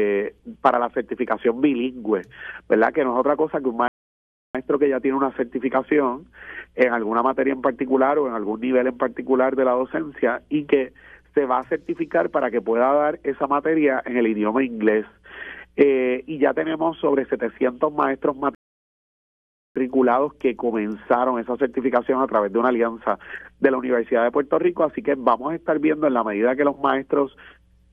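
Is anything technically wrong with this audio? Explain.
Yes. There are two rebuffering stalls, at 3.88 to 4.55 s and at 18.55 to 19.76 s. The player exhausted its downloaded audio and waited for more data, so the sound drops to silence for 0.67 s and then 1.21 s, resuming exactly where it stopped, with nothing missing but time added.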